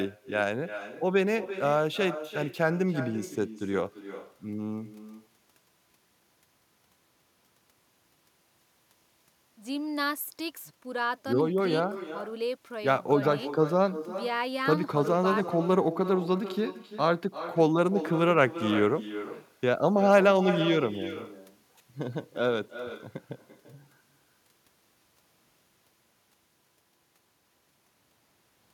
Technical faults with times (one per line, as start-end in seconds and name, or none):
0.00-28.73 echo with no canceller